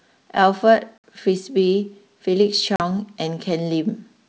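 At 0.98 to 1.04 s (60 ms) and 2.76 to 2.81 s (40 ms), packet loss on an ADPCM call leaves hard-edged silent gaps, each a few packets long. Waveform and spectrogram drop to a blank column. Afterward the decoder's predictor and step size briefly mismatch the sender's, so the speech re-enters slightly distorted for some tens of milliseconds.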